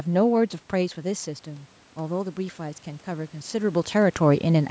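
From 0.74 s to 3.98 s there is automatic gain rising. Shortly after the talker moves away from the microphone, around half a second in, the input level falls by about 11 dB. The gain control responds slowly, adding about 6 dB over more than three seconds. The speech and the room noise swell together as a gradual lift rather than a step, and the gain is still climbing when the talker shifts position again near 3.5 s.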